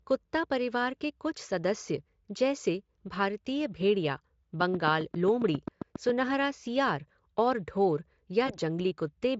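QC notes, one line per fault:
4.61–6.10 s: train of clicks. About ten sharp, similar pops at a regular 7.4 per second, peaking roughly 10 dB above the speech and audible in gaps too; likely external interference or a struggling interface. On a waveform, evenly spaced spikes; on a spectrogram, thin full-height vertical lines.
8.47–8.58 s: VoIP packet loss concealed by the speech codec. A 20 ms gap, one frame, was filled by the Speex decoder extending its last pitch and filter with falling gain, so the speech briefly fades and stays weak before recovering. A spectrogram shows smeared, fading energy; the waveform shows a dipping envelope.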